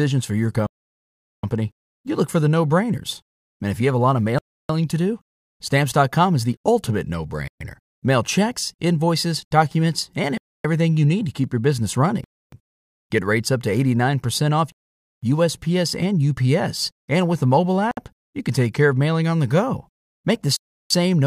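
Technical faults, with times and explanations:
0.67–1.43, 4.39–4.69, 7.48–7.61, 10.38–10.65, 12.24–12.52, 14.72–15.23, 17.91–17.97 and 20.56–20.91 s, Bluetooth stall: a likely wireless hold-up let the headphone buffer empty, so playback freezes into dead silence lasting from 59 ms to 0.77 s, the longest right after "for your". Others follow "is the ultimate no" and "to keep your business". Each time the speech resumes abruptly once delayed packets arrive, leaving hard gaps across the recording.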